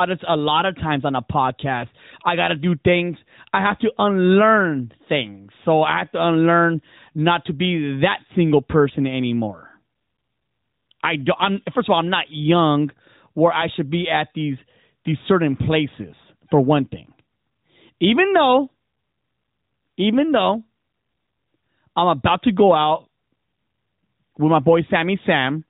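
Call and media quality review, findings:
Nothing to flag on this speech clip: no faults turned up anywhere in it, and the narrowband mobile-codec character is just the ordinary sound of that path working normally.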